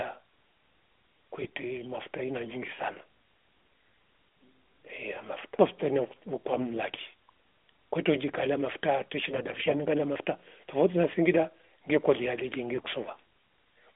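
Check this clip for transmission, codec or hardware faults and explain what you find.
The speech was carried over the AMR narrowband mobile codec, with a band of roughly 250 Hz to 3.5 kHz and a light synthetic edge that fits its 12.2 kbps mode. Four bursts of AMR bit errors run through it.

AMR bit errors occur at 1.44–1.50 s, 4.28–4.36 s, 6.47–6.66 s and 9.30–9.77 s. The last is the longest. A weak radio link flipped a few percent of the less protected bits in each frame while the check on the key bits still passed, so the decoder used them. Misplaced excitation pulses and skewed gain and spectral values leave pitch and loudness roughly intact but make the voice briefly hoarse, scratchy and gargling.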